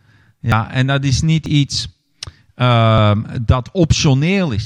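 At 0.52 s, 1.46 s and 2.98 s the audio likely suffers a dropped buffer (overrun): the program fell behind and the hardware overwrote samples before they were read, so a short stretch vanished and the surrounding audio was spliced directly together. Each point gives a sudden forward jump in the sound, not a gap of silence. Roughly forty milliseconds goes missing at the first and third, and about half that at the second.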